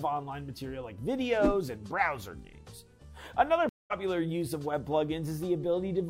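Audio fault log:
3.69–3.93 s, stream reconnect: the connection dropped, leaving about 0.19 s of silence, then a fresh decoder resumed the stream roughly 0.15 s further on, so content is skipped. Waveform shows a flat gap; the spectrogram shows a blank band across all frequencies, ending in a mismatched restart.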